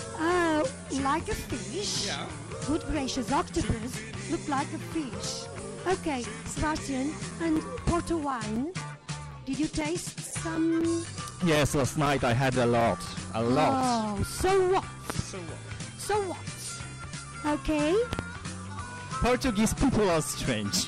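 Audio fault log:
7.31–13.81 s, periodic USB or driver dropouts: a recurring block on the bus silences about 4 ms of audio every 0.25 s, leaving roughly thirty evenly spaced ticks.
15.10–15.22 s, loud pop: a sudden voltage pulse, likely from a switch or static discharge, adds two sharp pops about 15 dB above the sound, which continues underneath.
18.13–18.22 s, loud pop: another abrupt voltage step, likely from a plug or driver glitch, produces two quick pops peaking about 20 dB above the sound beneath them.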